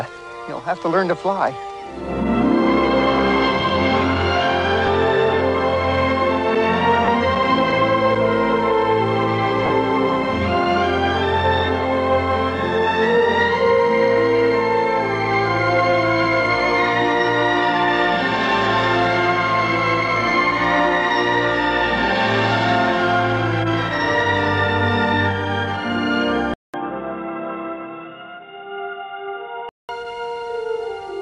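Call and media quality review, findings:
Lost LE Audio frames, 4.87 s: a brief noisy smear, 10 ms, fits one LC3 frame. Decoder concealment repeats the last spectrum with randomized signs.

Lost LE Audio frames, 7.05–7.08 s: a 30 ms smear, longer. Same concealment, consistent with three consecutive 10 ms frames.

Lost LE Audio frames, 9.66–9.70 s: a 40 ms smear that begins fading toward silence as concealment attenuates past the first few repeated frames.

Input switched to a poorer device, 26.54–29.89 s: a 200 ms silence at the switch, then dull, boxy audio with nothing above 3.8 kHz, a few dB quieter, and a new noise floor around 40 dB down. Likely a move to a headset call-profile or secondary microphone.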